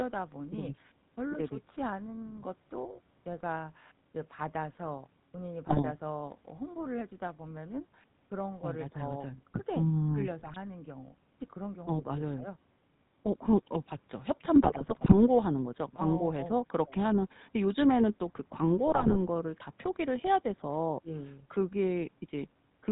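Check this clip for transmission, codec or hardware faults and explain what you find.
Two faults are present: GSM full-rate codec coloration throughout the speech, and four bursts of GSM bit errors.

The GSM full-rate codec is audible for the whole clip, with a sound that fits the 13 kbps full-rate scheme. The coder rebuilds the voice from a vocal-tract filter excited by a sparse, regularly spaced pulse train, so the voice sounds buzzy and gravelly. On a spectrogram, energy stops abruptly at 4 kHz, and harmonics look smeared and grainy rather than cleanly striated.

GSM bit errors break through at 5.69–5.84 s, 10.40–10.56 s, 14.55–15.15 s and 18.87–19.17 s, the third burst being the longest. Corrupted filter, pitch and gain parameters make the decoder produce wrong frames, heard as squawks, pops and gargling. The waveform shows sudden level spikes in those spans, and the spectrogram shows blocky, frame-sized patches of misplaced energy.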